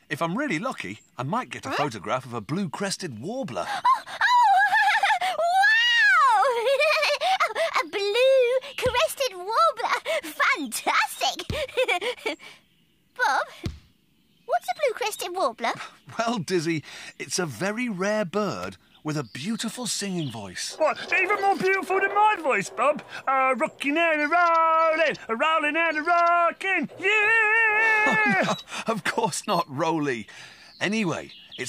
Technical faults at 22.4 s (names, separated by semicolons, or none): gap at a join of encoded pieces